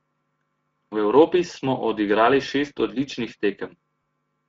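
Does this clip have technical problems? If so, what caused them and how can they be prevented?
Yes. The speech is affected by two faults.

Speex codec damage runs through the whole clip and is plainly audible. Speex is a CELP codec, and here it has too few bits to model the excitation well, so the voice sounds hoarse, grainy and noisy. The coding level points to a mid-range setting, roughly 17 kbps. On a spectrogram, the harmonics look smeared and the band above 4 kHz shows as diffuse, noise-like fill instead of detailed structure. To prevent it, use a higher-quality setting or a modern codec such as Opus.

VoIP packet loss concealed by the speech codec occurs from 4.01 to 4.03 s, a gap of 20 ms, which fits a single lost frame. The decoder repeats its last pitch and filter with falling gain, so a brief buzzy, smeared patch replaces the real sound. The speech stays weak or distorted for a short time afterwards, because each following frame is rebuilt from that guess. 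On a waveform this shows as a short, overly regular stretch with shrinking amplitude. On a spectrogram it shows as flat, repeated harmonics. To prevent it, use a jitter buffer with forward error correction or redundant packets on lossy networks.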